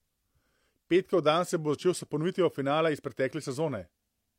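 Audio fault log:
Nothing to log here, as the speech comes across without a single fault worth a line.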